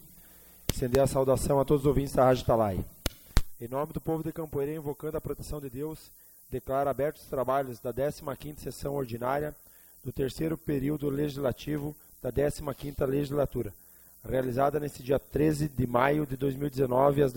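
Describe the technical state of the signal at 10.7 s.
At 10.7 s the signal carries two faults. The first is low bit depth with noise shaping, present for the whole clip. The quantiser has very few levels, consistent with a word length of about 9 bits, and its rounding error is fed back so the error energy is pushed toward high frequencies. The result is a steady, thin hiss sitting roughly 25 dB below the signal, climbing sharply toward the top of the band rather than spreading evenly.

The second is overlap-add ripple, running from 8.21 s to the end of the clip. The audio was split into windowed frames and rebuilt with overlapping windows that do not add up to a flat gain, so the level swells and dips once per frame. The swing is about 6 dB at a rate of roughly a hundred times a second. It is heard as a metallic buzz with extra tones around each note, laid over everything in this stretch.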